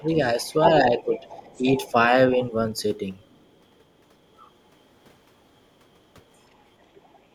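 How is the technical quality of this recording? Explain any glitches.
The speech has echo-control problems: it is briefly ducked twice, and a faint second voice leaks through at several points.

Speech suppressed in double talk, at 0.0 to 0.09 s and 0.81 to 1.42 s: the speech dips by a few decibels and then more deeply, most likely because the echo canceller turned everything down while both sides were talking.

The other side's voice leaking through, at 0.08 to 1.91 s, 2.33 to 2.38 s, 3.23 to 3.81 s and 6.43 to 7.2 s: a quiet second voice sits well below the main speech, most audible in the first two stretches and faint later. It is likely loudspeaker echo that the canceller did not fully remove.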